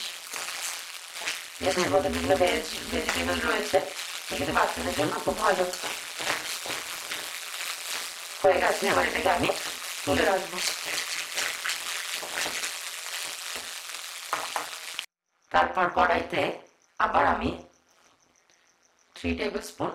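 Throughout, overlap-add ripple: mismatched frame overlap swings the level by about 60 dB around 150 times a second, a robotic buzz, seen as evenly spaced notches and striping.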